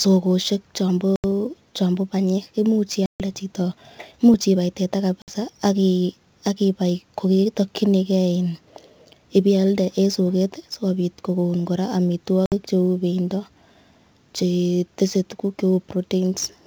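Sample clock jitter runs through the whole recording. The unsteady converter clock adds a faint hiss, about 30 dB below the speech, that grows on loud, bright sounds.

At 1.16 to 1.25 s, an 80 ms hole marks packet loss on an ADPCM call. The gap is silent and hard-edged. The decoder's predictor then lags the sender, so speech returns briefly distorted. The same happens at 3.06 to 3.21 s, with 140 ms lost.

At 4.34 to 4.36 s, a single loud pop sits on top of the speech, about 10 dB above it. Its likely cause is a sudden voltage step, such as a switch or static discharge.

Two further ADPCM packet losses follow, at 5.22 to 5.30 s and 12.46 to 12.53 s. Each drops 60 ms, followed by a short mistracked recovery. The wideband G.722 coding, which fits the full 64 kbit/s mode, adds at most a faint upper-band hiss.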